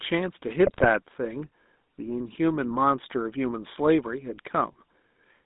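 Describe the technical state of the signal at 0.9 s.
At 0.9 s the speech carries GSM full-rate codec coloration. The codec rebuilds the voice from a vocal-tract filter excited by sparse regular pulses, which fits the 13 kbps full-rate scheme. The result is a plainly audible buzzy, gravelly texture confined to roughly 200 Hz to 3.7 kHz.

A burst of GSM bit errors runs from 0.66 to 0.87 s and ends just before this point. Corrupted filter, pitch and gain parameters distort individual frames, producing squawks, pops and gargling that give way to the steady codec sound by 0.9 s.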